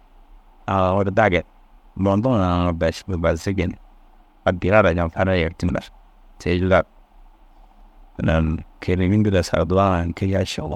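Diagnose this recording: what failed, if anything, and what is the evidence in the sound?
The compressed stream carries damaged data at one point, so the fault lies at the codec stage, where the decoder reads the stored or transmitted bitstream. Between 5.66 and 5.70 s the speech is broken by a brief chirp or blip lasting about 44 ms. The bytes there no longer form valid frames, so the decoder misreads or discards them, loses sync, and scans ahead for the next intact frame header before normal decoding resumes.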